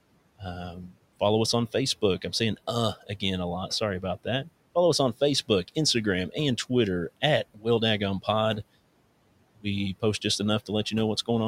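At 7.54 to 7.65 s, speech is cut by the noise suppressor. For about a tenth of a second, it mistakes the speech for background and pulls it down by about 15 dB. The sound turns faint and swallowed, dipping toward the room noise, which sits about 23 dB below speech.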